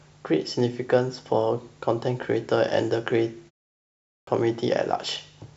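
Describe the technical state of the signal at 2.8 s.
At 2.8 s the speech signal is intact, with no fault present at that moment.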